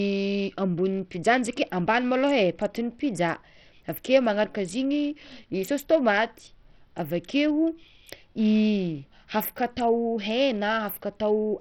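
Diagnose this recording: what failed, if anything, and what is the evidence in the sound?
The codec stage failed, with Bluetooth SBC compression the likely cause. The speech is heavily damaged from start to finish. The treble flickers and drops out, and a gritty, aliased noise clings to the speech, as expected when a starved bit pool spread across SBC's few wide sub-bands leaves the weaker top bands with almost no bits. The coarseness points to a rate around 64 kbps, and nothing remains above about 19.8 kHz.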